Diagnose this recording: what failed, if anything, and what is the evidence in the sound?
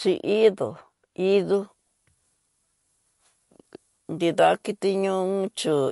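The whole clip has a watery, swirly quality and nothing above about 11.3 kHz. That's likely MP3 compression at the codec stage, with weak frequency lines switching on and off between frames, and the damage is plainly audible, pointing to a low bitrate around 48 kbps.

From 1.53 s to the end, the treble jumps up, roughly 10 dB at 10 kHz relative to 1 kHz, so the speech turns thin, bright and sibilant. That's pre-emphasis left on. A treble boost, fitting a 50 µs FM curve, went in without the matching de-emphasis cut.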